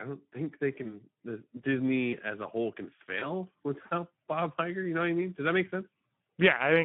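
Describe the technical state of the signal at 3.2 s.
At 3.19 s, just after "as a whole can", there is VoIP packet loss concealed by the speech codec, lasting until about 3.33 s. A gap of roughly 20 ms, consistent with one lost frame, was filled by the decoder extending its last pitch and spectral envelope at falling gain. Because each following frame builds on that guess, the distortion outlasts the gap itself. It sounds like a brief smear that stays weak for about a tenth of a second. On a spectrogram, the harmonics freeze into flat, evenly spaced lines and then fade. On the waveform, the period repeats with a decaying envelope.

Underneath, the whole signal carries Speex codec damage. The hoarse, noisy texture points to a low setting around 11 kbps. The band is confined to about 150 Hz to 3.5 kHz, so a spectrogram shows a hard ceiling near 3.5 kHz with nothing above it. The harmonic structure looks grainy, with noise filling between the harmonics, and the coarse excitation makes the waveform look rough rather than cleanly periodic.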